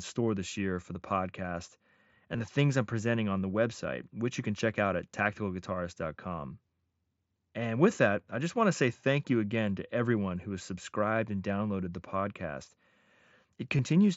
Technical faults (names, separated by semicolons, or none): concealed Bluetooth headset packet loss